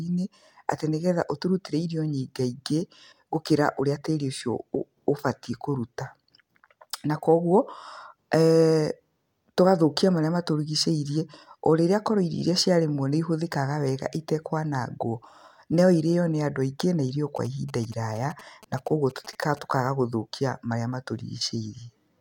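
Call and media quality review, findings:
GSM signalling bursts, 17.36–19.59 s: galloping pattern of short buzzes around 20 dB below the speech, from a nearby 2G phone's radio bursts being rectified. Spectrogram shows 217 Hz comb lines; waveform shows clustered spikes.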